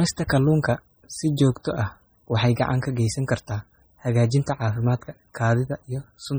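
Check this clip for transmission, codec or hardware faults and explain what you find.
One fault runs through the whole speech clip: heavy damage that sounds like MP3 compression. The sound has a watery, swirling quality, with s sounds turning metallic and chirpy and consonant attacks smeared. The likely cause is an encoder starved of bits, which fits a very low rate around 32 kbps. To save bits it zeroes weak frequency lines, which then flicker on and off from frame to frame. That flickering is what sets it apart from a simple low-pass filter or narrowband channel, which would sound dull but steady rather than shimmering.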